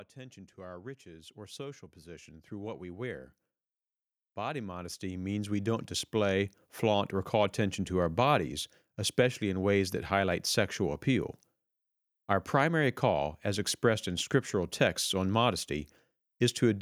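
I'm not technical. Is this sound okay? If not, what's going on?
No. Automatic gain rising happens twice, from 0.14 to 3.27 s and from 4.46 to 7.12 s. The recording level climbs slowly, so speech and background swell louder together.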